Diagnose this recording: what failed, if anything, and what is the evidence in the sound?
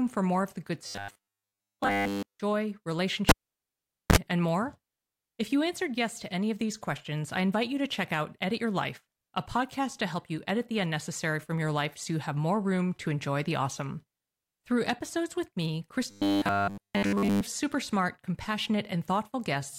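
From 0.87 to 2.40 s and 16.11 to 17.41 s, speech becomes a rigid metallic buzz at 100 Hz: robotic sound from repeated short buffers. The likely cause is a starved buffer stage looping 10 ms chunks. A spectrogram shows flat, evenly spaced 100 Hz harmonics.

At 3.29 s a pop begins a cable pulled and plugged in fault in the analogue wiring. The waveform goes near-flat for 0.82 s, then shows a 39 ms burst of 60 Hz mains buzz before a second pop at 4.16 s. Both pops appear on a spectrogram as vertical broadband lines.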